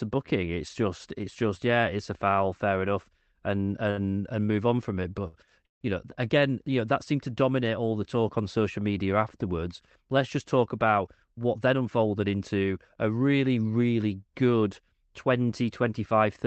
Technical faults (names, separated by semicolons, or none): repeated stalls (stutter); short stall from a late packet; call audio freeze; jitter buffer speed-up